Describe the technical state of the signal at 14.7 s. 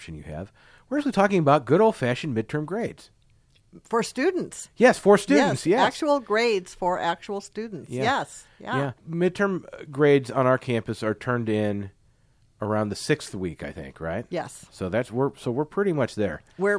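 At 14.7 s the speech signal is intact, with no fault present at that moment.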